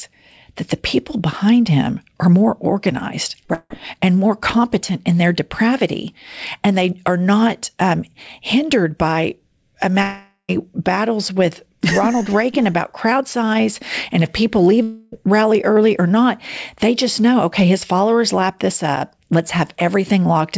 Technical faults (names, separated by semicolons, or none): short concealed packet loss; long network dropout